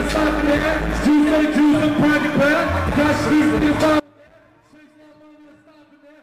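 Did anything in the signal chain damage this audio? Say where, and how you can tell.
Yes. An audio dropout to a faint residue starts at 4.0 s and runs to the end, leaving only faint sound roughly 30 dB down. The likely cause is an upstream break with the downstream path still live.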